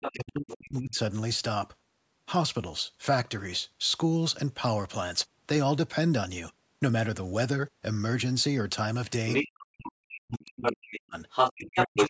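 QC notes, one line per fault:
0.0–0.12, 0.49–0.54, 9.29–9.62, 10.37–10.98 and 11.3–12.09 s: other side's voice leaking through. A second voice sits under the main speech, quieter early on at roughly 5 to 15 dB down, later as loud or louder. This is likely loudspeaker echo the canceller missed.
0.12–0.99, 9.65–11.16 and 11.53–12.09 s: speech suppressed in double talk. The main voice sinks by roughly 35 to 40 dB while the other side is audible, likely because the canceller turned both talkers down. A network dropout would silence everything rather than only the main voice during overlap.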